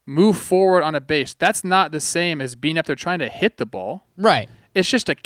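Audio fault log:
Nothing stood out on listening to this speech clip.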